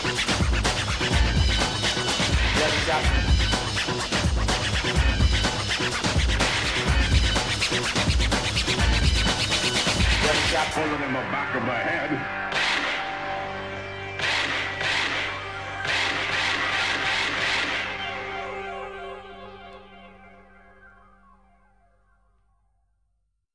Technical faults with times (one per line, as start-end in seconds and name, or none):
none